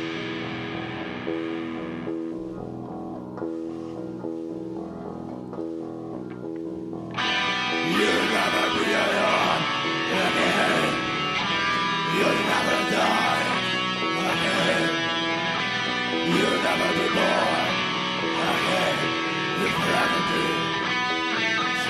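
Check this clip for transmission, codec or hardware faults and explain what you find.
No transmission, codec or hardware faults.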